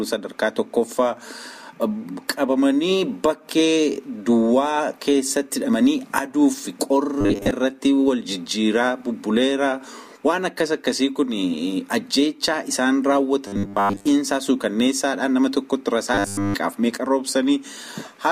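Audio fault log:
7.21–7.51 s, 13.47–14.05 s, 16.14–16.54 s: robotic sound from repeated short buffers. A rigid 100 Hz metallic buzz is likely caused by a 10 ms chunk being looped while fresh audio is skipped. It replaces most of the sound in the first two events and all of it in the last.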